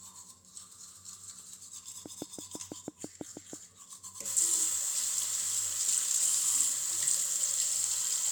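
From 2.06 to 3.54 s there's a train of clicks: about ten sharp ticks, all much the same shape, arriving at a steady 6.1 per second. They poke out roughly 10 dB above the sound underneath, so they're easy to pick out as a regular popping laid over the audio. Something is injecting a pulse at a fixed rate, likely interference from nearby equipment or a faulty connection or power supply.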